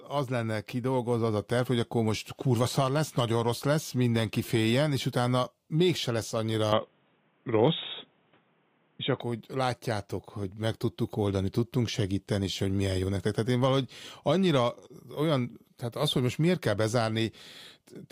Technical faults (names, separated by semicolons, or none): input switched to a poorer device